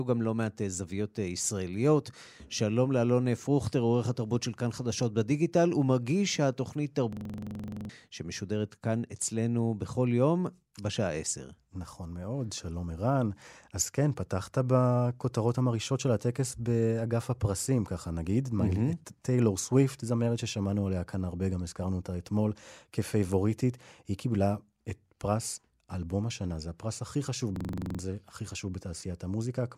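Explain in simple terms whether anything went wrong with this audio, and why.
Something did go wrong, twice. From 7.13 to 7.89 s, and again from 27.56 to 27.99 s, the speech turns into a rapid, rattly buzz. That's a system hang loop: the computer briefly froze while the sound hardware kept replaying the same tiny slice of audio, about 43 ms long, roughly 23 times a second. That fits a 2048-sample buffer. The first freeze swallows around 0.7 s of real speech, and the second about 0.4 s.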